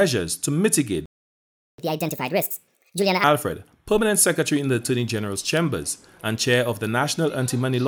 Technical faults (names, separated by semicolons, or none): playback stall; catch-up at higher speed